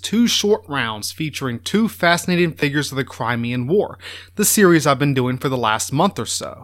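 At 2.60 to 2.62 s there's a repeated buffer. New audio didn't reach the device in time, so it played the last chunk again, about 11.6 ms long, which fits a 512-sample buffer. It plays twice more, with a hard join each time, heard as a quick buzzy stutter that skips about 20 ms of speech. The same thing happens at 4.32 to 4.35 s with three repeats, giving a slightly longer buzz and a gap of about 40 ms.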